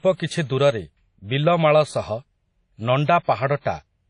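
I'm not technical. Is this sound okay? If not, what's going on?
No. The speech sounds washy and ringing from start to finish. A hiss swells and fades along with the voice. Nothing above 10.1 kHz survives, so it sounds dull. This is likely WMA compression, squeezed hard to save space.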